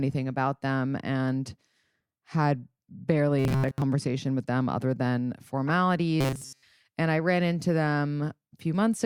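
From 3.39 to 3.84 s, new audio likely stopped reaching the output in time, so the playback repeated a very short buffer to cover the gap. The result is robotic sound from repeated short buffers. Most of this stretch is replayed rather than fresh audio, and the loop imposes a steady 133 Hz buzz, which points to a buffer of about 7.5 ms. The speech becomes a hard, metallic drone that only loosely tracks its original shape.

At 4.39 to 4.43 s, just before "them other than", a corrupt frame decoded: damaged compressed data went through the decoder unchecked, scattering energy into the wrong frequencies. It lasts about 40 ms, which points to a couple of frames hit, and it is heard as a short glitch.

The same corrupt frame decoding happens again at 5.67 to 5.70 s, right after "them other than". This glitch lasts about 23 ms.

From 6.21 to 6.63 s the robotic sound from repeated short buffers returns. 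The same short loop likely replaces the entire stretch this time, so for the whole 0.42 s the sound is the rigid, metallic 133 Hz buzz.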